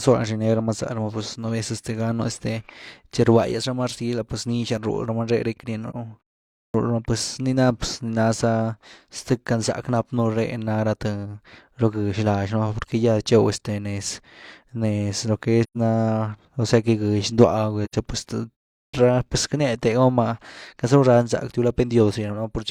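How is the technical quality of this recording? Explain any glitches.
The speech has two kinds of glitch: short dropouts and clipped word onsets.

AAC frame loss with muting occurs at 5.90 s, 15.63 to 15.77 s after "lo que", and 17.84 to 17.95 s. Lost frames decode as silence. Overlapping windows soften each gap.

Clipped starts after a pause occur at 6.63 s, before "rama pues nii ná", and at 18.82 s. The waking output swallows about 110 ms. Sound begins abruptly.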